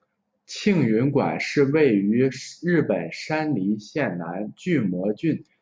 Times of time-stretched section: none

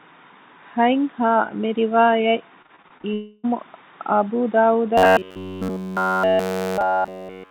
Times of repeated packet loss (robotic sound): 2.62-3.05

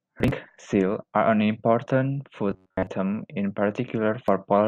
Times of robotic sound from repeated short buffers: 2.51-2.87

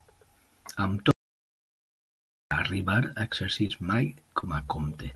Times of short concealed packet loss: 3.67-3.71, 4.40-4.44

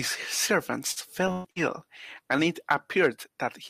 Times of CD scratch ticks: none

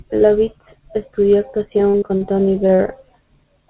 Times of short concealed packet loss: 2.67-2.81

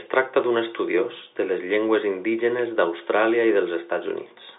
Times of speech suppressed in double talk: none

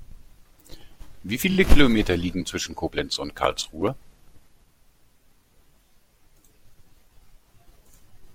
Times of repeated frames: 1.50-1.56

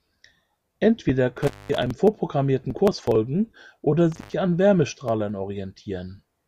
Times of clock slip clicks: none

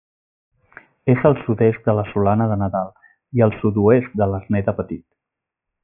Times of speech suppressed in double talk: none

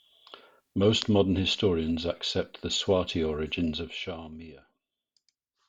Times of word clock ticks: none

